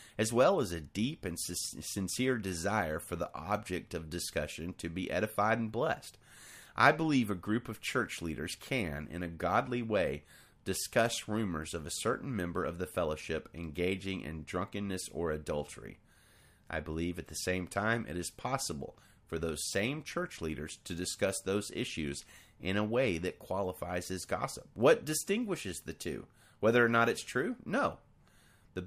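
No technical faults are audible.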